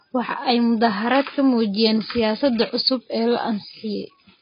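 From start to finish the speech has nothing above 5 kHz and heavy codec damage: dull, smeared, with a warbling or fizzy texture on sustained sounds and sibilants. The likely cause is AAC compression, AAC-LC, which fits a bitrate around 16 kbps.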